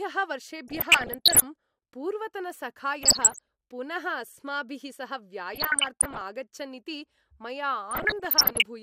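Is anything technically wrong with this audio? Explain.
Yes. DAB burbling occurs at 0.68–1.46 s, 3.01–3.47 s, 5.54–6.22 s and 7.91–8.63 s. Weak reception lets bit errors, around 0.7 to 1 percent, slip past error correction. Corrupted scale factors then make sub-bands jump in level for up to a frame. The speech gets short blips of noise in single sub-bands.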